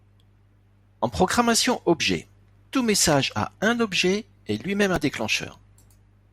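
The clip is speech with one repeated buffer at 4.96 s. New audio arrived late, so the device replayed a tiny 1.33 ms piece several more times, which fits a 64-sample buffer. The hard joins make a brief buzz. About 5 ms of audio goes missing.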